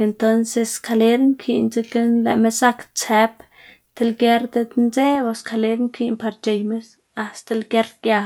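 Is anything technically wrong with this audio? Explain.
Yes. From 5.15 s, the speech turns duller and a bit quieter, cut above 11.6 kHz, with faint new hiss: likely an input switched to a poorer device.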